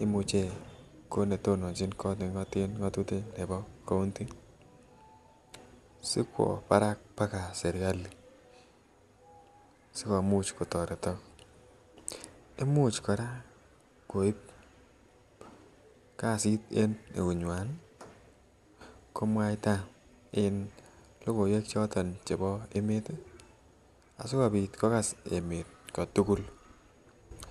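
At 22.76 s the speech jumps ahead by roughly 70 ms, consistent with about three compressed frames skipped at 26.1 ms each.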